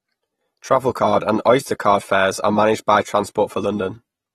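From start to finish the speech has nothing above 13.9 kHz and sounds dull and smeared, with a warbling, fizzy edge on sibilants. The likely cause is AAC compression, fitting AAC-LC near 37 kbps, where the encoder lowers its cut-off and quantises the remaining spectrum coarsely.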